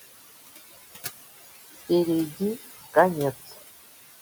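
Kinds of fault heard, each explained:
Noise suppressor artifacts: The suppressor pulls down bands it judges to be steady noise, cutting the room noise by about 17 dB between phrases, leaving it pumping under the speech.
Speech cut by the noise suppressor: The suppressor mistook a short stretch of speech for noise at 3.47 to 3.58 s, dropping it by up to about 15 dB, so roughly a tenth of a second sounds swallowed.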